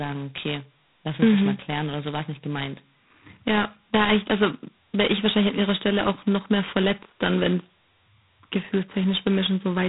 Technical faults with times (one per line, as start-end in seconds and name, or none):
0.00-9.88 G.726 ADPCM